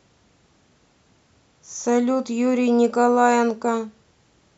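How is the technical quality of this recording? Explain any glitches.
Not great, since one glitch runs through the whole speech clip. Throughout, the resampler restarted on every block, converting 48 kHz to 44.1 kHz in 40 ms chunks without seeing neighbouring samples. That leaves a soft tick at each edge, 25 times a second, riding under the speech.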